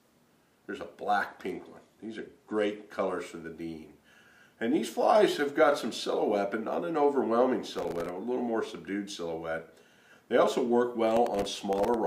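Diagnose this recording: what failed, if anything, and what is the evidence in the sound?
Bluetooth SBC bit pool drop, codec stage: from 1.27 to 3.18 s the top end goes dull and a gritty noise creeps in. That fits the phone cutting the SBC bit pool from 31 to 15, around 105 kbps, to keep a busy link going. The upper sub-bands starve and the rest gets quantised coarsely.

Processor overload crackle at the driver or buffer stage: bursts of crackly tearing at 7.73–8.09 s and 11.11–11.94 s. Dozens of tiny buffers, around a millisecond and a half each, missed their deadlines. Each one replayed stale audio with hard edges, so the skips pile up into grit.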